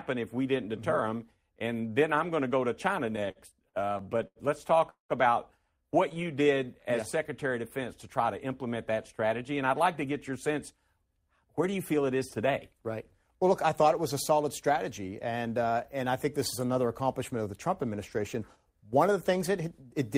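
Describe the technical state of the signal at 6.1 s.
Repeated stalls (stutter) run from 6.09 to 6.28 s, just after "about what". Packets arrived late, so the jitter buffer ran dry four times and the receiver extended the last sound, 40 ms in total, none longer than 12 ms. Nothing is lost, but the passage drags and stutters.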